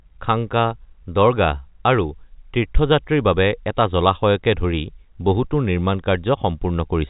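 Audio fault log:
No faults to log in this audio.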